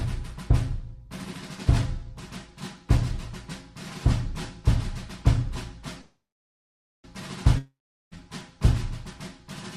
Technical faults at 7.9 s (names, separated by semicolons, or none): long network dropout